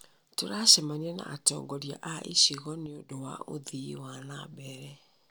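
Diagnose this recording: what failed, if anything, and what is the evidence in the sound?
Right after "na atongoria a icigo" the speech drops by about 6 dB from 2.86 to 3.11 s, then snaps back. That's one channel dropping out, likely a loose stereo connection in the analogue wiring, so the mono sum briefly carries only half the shared signal.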